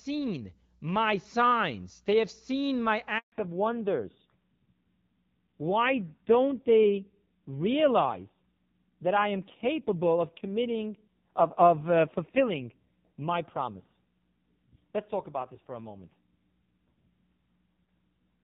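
At 3.18 s, just after "they have seen my", the sound cuts out in a handover gap. The call is moving between networks, and no speech frames arrive during the switch. The voice fades within a few tens of milliseconds. Then there is silence for 140 ms, until 3.32 s. Whatever was said in that window is gone. It sounds like a sudden hole in the speech.

From 3.32 s to the end, there is a fallback to narrowband. Before the gap, the HD Voice codec carries clear wideband speech with only light coding damage, which fits a rate around 12.65 kbit/s. After it, nothing remains above 4 kHz. The new link is using an older narrowband codec. Sibilants lose their edge, and the voice turns dull and rougher. That roughness points to a low narrowband rate, around 5.9 kbit/s.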